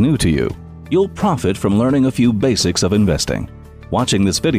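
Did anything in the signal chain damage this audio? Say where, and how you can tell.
No, nothing stood out on listening that would point to damage at any stage of the signal chain.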